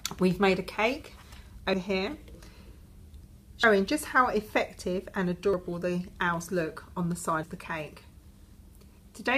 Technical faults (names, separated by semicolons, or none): audio missing between chunks